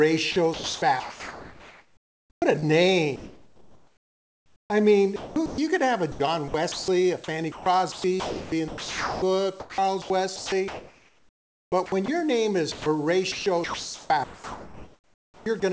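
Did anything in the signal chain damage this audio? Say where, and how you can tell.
Yes: sound chopped by the voice detector, likely in call processing, at 0.32–2.64, 3.16–5.58, 6.12–12.08 and 12.72–15.62 s. Gating swaps dropped stretches for synthetic noise, so the spectrogram alternates real detail with flat, featureless comfort-noise patches.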